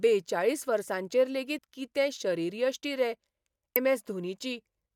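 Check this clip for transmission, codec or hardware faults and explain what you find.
The speech is interrupted twice by damaged data in a compressed stream. From 1.55 to 1.59 s there is a short glitch, and at 3.76 s a brief one cuts through. In both places some of the compressed bytes reaching the decoder were wrong, so it misread the frames there and lost sync, emitting garbled output until it locked onto the next valid frame header.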